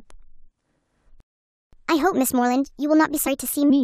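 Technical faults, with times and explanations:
1.20–1.73 s, playback stall: The player most likely ran short of buffered data, or its audio thread was held up, so nothing reached the output for about 0.52 s. The speech breaks off in mid-flow and a hole of silence follows, long enough to register clearly as an interruption rather than a pause in delivery.
1.73–3.70 s, catch-up at higher speed: Having fallen behind during the stall, the player works through its backlog by resampling it to run 1.25 times faster until the lost half-second is recovered. Because resampling shifts speed and pitch together, the speech both hurries and rises by about four semitones, giving a thin, sped-up quality across these two seconds before it settles back to its normal pace and pitch at 3.70 s.
3.26–3.28 s, damaged data in a compressed stream: A short stretch of the encoded stream is corrupt, so the decoder cannot interpret the frames at that point, loses its frame alignment and has to hunt for the next valid header before decoding properly again. 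The result is a brief disturbance of about 20 ms, heard during the sped-up section.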